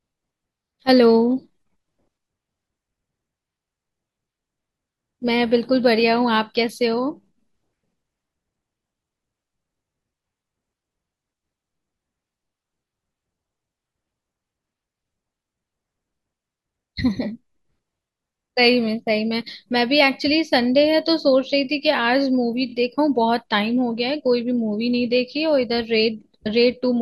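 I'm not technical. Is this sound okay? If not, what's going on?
No. At 22.68 s there are repeated frames: a tiny 23 ms slice of the speech plays three times in a row, causing a brief stutter and adding about 46 ms.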